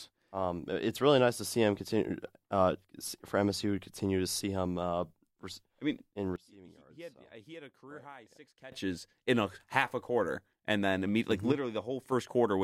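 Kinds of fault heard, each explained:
Sudden gain jump: Just after "I mean in", at 6.36 s, the speech and its background noise drop together by about 21 dB in a single step and stay down until 8.72 s, returning abruptly before "in a half a". A smaller step of about 6 dB follows from 11.52 to 12.12 s. The likely cause is a level setting applied without a ramp. A fade or compressor would glide, and a dropout would lose the noise floor rather than lower it.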